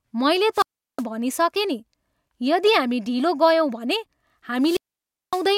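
Two wireless microphone squelch dropouts break the speech. At 0.53 to 1.04 s, hiss rises and the sound mutes for 365 ms. At 4.61 to 5.45 s, it mutes for 561 ms. The FM radio signal faded, so the receiver's squelch cut the output.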